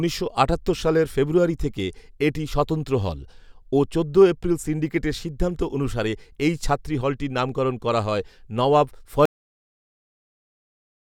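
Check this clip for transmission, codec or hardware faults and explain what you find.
One fault is present, a cut-off end. At 9.25 s the speech stops mid-sound and the track falls straight to digital silence for its remaining length. The final buffers were never written out or played back, so nothing decays; the sound simply ends abruptly.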